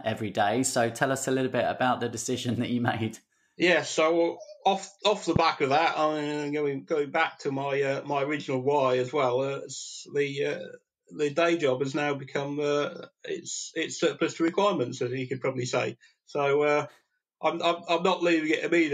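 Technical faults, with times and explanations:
5.36–5.38 s and 14.48–14.50 s, loud pop: A sudden voltage step, most likely from a plug, switch, static discharge or driver glitch, entered the signal path twice, and the downstream circuitry shaped each step into a brief pulse lasting a couple of hundredths of a second. Each is heard as a single sharp pop sitting on top of the sound, which continues underneath. The first rises roughly 15 dB above the surrounding level and the second roughly 10 dB.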